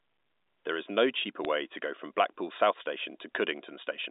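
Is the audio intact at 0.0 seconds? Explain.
Yes, the audio is intact at 0.0 seconds, with the speech coming through the telephone line's G.711 coding as that path normally sounds and nothing faulty at that moment.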